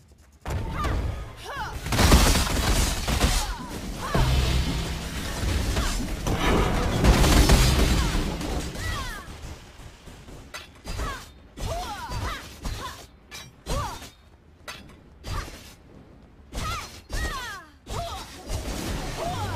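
Sample clock jitter runs through the whole recording. The converter's clock wanders, so each sample is taken a little early or late at random, on the order of several microseconds. The resulting error tracks how steeply the waveform is changing. It comes through as a grainy hiss riding on the sound, roughly 25 dB below it, thickening on loud and bright passages and dropping away whenever the sound goes quiet.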